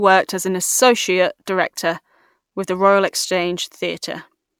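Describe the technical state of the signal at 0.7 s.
At 0.7 s the speech signal is intact, with no audible technical fault at that moment.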